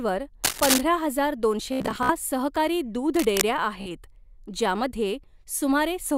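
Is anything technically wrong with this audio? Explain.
Yes. From 0.44 to 0.81 s, and again from 3.14 to 3.42 s, cable scratch noise appears. A worn cable or connector likely shifted. Scratchy bursts rise to about the speech level, then slightly below it.

Bluetooth stutter occurs from 1.73 to 2.13 s and 3.81 to 3.90 s. Late packets made the receiver repeat short slices, causing a machine-gun buzz before the speech resumed further on.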